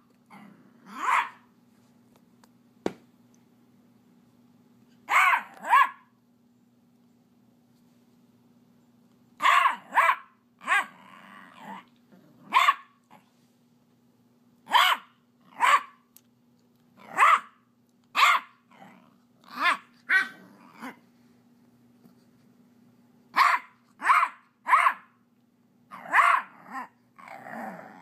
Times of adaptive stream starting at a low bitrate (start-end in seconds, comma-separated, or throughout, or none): none